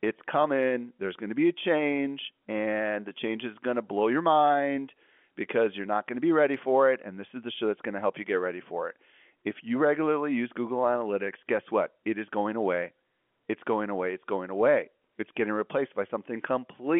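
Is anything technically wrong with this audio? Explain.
No, nothing stood out on listening to this telephone-band speech.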